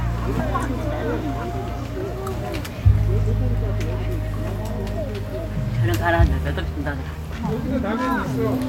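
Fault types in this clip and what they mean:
No faults can be heard anywhere in this audio.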